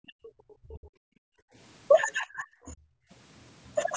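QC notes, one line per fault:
0.04–0.14 s, 0.6–0.94 s and 2.04–2.91 s: speech suppressed in double talk. Likely the echo canceller could not tell the near talker from loudspeaker echo while both sides spoke, so it turned everything down. The speech dips by roughly 30 to 35 dB, briefly at first and for most of a second at the end.
1.22–1.55 s: background gated by the echo canceller. With the loudspeaker active, the canceller clamped the microphone hard, so the room sound falls away by about 40 dB for roughly a third of a second, then returns once the canceller releases.
2.09–2.13 s: other side's voice leaking through. The echo canceller likely left residual loudspeaker pickup in the microphone signal, so a brief scrap of the far voice is heard about 25 dB below the talker, inside the double-talk dip.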